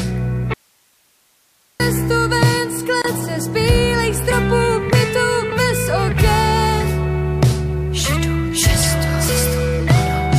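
At 0.54 s the sound cuts out abruptly and stays gone until 1.80 s, leaving about 1.26 s that holds only a thin bed of hiss, roughly 40 dB below the normal level, before the signal snaps back mid-flow. This audio dropout to a faint residue was likely caused by the wanted signal being lost while the path after the break stayed live, so the hiss carried on through the gap instead of true silence.

From 3.02 to 3.04 s a brief hole of about 26 ms opens in otherwise continuous sound. Its edges are smeared by the codec, and the sound resumes exactly where it left off. This is a gap at a join of encoded pieces: separately encoded sections were butted together untrimmed, so the encoder's start-up delay and the padding of the last frame stayed in as a short silence.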